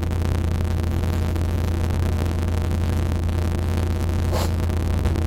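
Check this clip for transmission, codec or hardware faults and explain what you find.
There is one fault, present from start to finish. A steady buzz at about 138 Hz sits under the sound, which plays about 1.6 times too fast while staying near its normal pitch. This is a block size mismatch (truncated). Each block is written longer than the next stage reads, which fits 512-sample blocks. The tail of every block is dropped, and each cut produces a click at the block rate.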